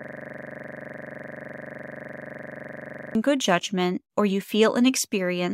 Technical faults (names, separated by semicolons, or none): system hang loop